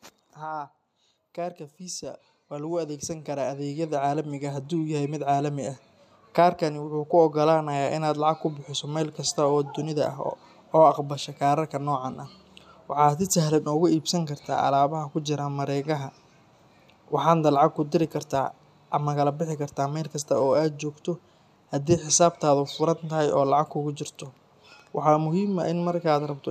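From 0.38 s to 16.0 s the level climbs steadily by about 18 dB, a case of automatic gain rising: the gain control judged the speech input too quiet and kept raising its gain, so the voice and background noise swell together over that span.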